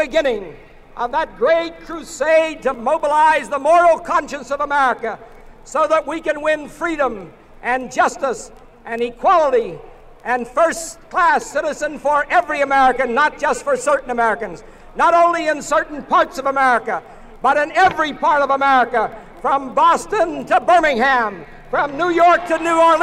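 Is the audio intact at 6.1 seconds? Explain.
No. At 6.12 s there is a bit error spike: one sample whose value jumped by a power of two, most likely from a bit flipped in memory or on a digital link, and then returned at once. It is heard as a single sharp tick unrelated to the surrounding sound, reaching about -32 dBFS. On a waveform it appears as a one-sample needle; on a spectrogram, as a thin vertical line across all frequencies.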